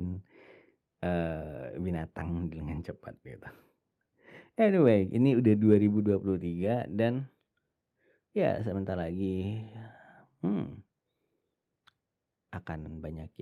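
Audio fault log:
No faults were found in this speech clip.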